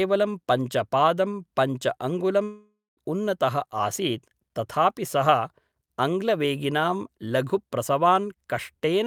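From 2.43 to 2.99 s the speech gives way to a decaying buzz or hiss, then about 0.2 s of silence, likely a long network dropout losing roughly 0.54 s of audio.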